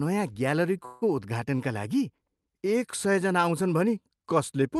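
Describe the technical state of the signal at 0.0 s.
At 0.0 s the speech signal is intact, passing through the WebRTC call path with only the normal coding character of a call codec limited to about 12 kHz.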